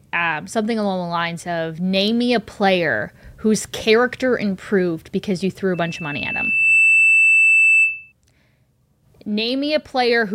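From 5.74 s to 8.12 s, just after "improved because you threw", loudspeaker feedback squeal sets in: the microphone re-amplifies its own loudspeaker, and a 2.6 kHz tone swells over roughly a second to about 5 dB above the speech. Unlike a steady interfering whistle, it grows by itself.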